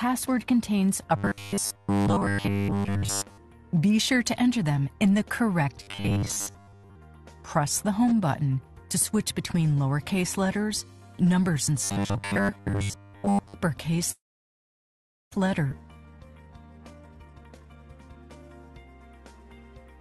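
From 1.17 to 3.38 s, 5.83 to 6.96 s and 11.84 to 13.55 s the sound turns into a rigid metallic buzz at 100 Hz. This is robotic sound from repeated short buffers, likely caused by a 10 ms block being replayed while fresh audio was late. In the first stretch essentially all of it is repeated, and in the later two most of it. A spectrogram shows evenly spaced horizontal harmonics at 100 Hz multiples, and the waveform shows identical copies every 10 ms.

At 14.11 to 15.35 s comes a call audio freeze, likely from held-up packets draining the jitter buffer. A brief continuation of the last sound fades into about 1.1 s of silence, and then playback resumes where it stopped. On a waveform this is a flat gap of roughly 1.2 s, and a spectrogram shows a blank band across all frequencies.

At 15.72 to 15.75 s playback will skip ahead, jumping forward about a second. The two sides are spliced almost directly, showing as an abrupt spectral discontinuity with no gap.

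From 15.87 to 16.85 s a jitter buffer slow-down plays audio at 79% speed at the same pitch, adding 220 ms through repeated pitch periods. Sounds are drawn out, and a spectrogram shows stretched formants with unchanged harmonic spacing.

From 16.90 to 18.50 s a jitter buffer speed-up runs at 137%, removing around 0.7 s of short cycles. The audio sounds hurried, with compressed spectral events at the same pitch. Throughout, the spectrum stops near 12 kHz, which fits the Opus call path.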